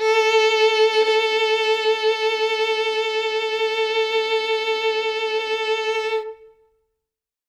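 No technical faults can be heard in this music clip. Nothing in the audio breaks, stalls or changes unexpectedly at any point.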